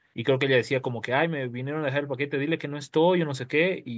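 No technical faults can be heard anywhere in the speech. It has passed through a call's microphone processing, which trims the lowest bass and leaves nothing above 8 kHz, as that path normally does.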